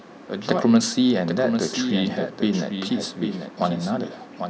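From start to finish, every stretch of speech is trailed by a second, full-band copy of itself arriving roughly seven tenths of a second later and only a little quieter, around 5 dB down. The echo carries no reverberant tail or room colouring, so it sounds like a stacked duplicate rather than an acoustic reflection. This is a doubled audio track, likely caused by the signal being captured twice, with one path running behind the other.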